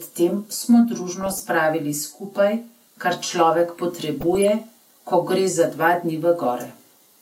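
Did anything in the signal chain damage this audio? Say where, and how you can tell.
Yes. DAB burbling at 1.21 to 1.44 s and again at 4.20 to 4.48 s. The damage happened at the codec stage, on the broadcast path. Both bursts put short blips of noise over the speech. Poor reception let a fraction of a percent of bits slip past error correction into the MP2 data. Corrupted samples then put noise blips into individual sub-bands, across roughly a dozen frames in each burst.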